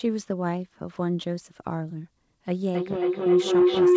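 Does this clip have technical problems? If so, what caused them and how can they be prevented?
Yes. From 2.5 s to the end of the clip, feedback howl builds. Two devices on the call share a room, so each microphone-to-loudspeaker trip adds gain. The repeats, about every 300 ms, narrow to a tone near 400 Hz that peaks about 9 dB above the speech. To prevent it, mute or use headphones on all but one device in the same room.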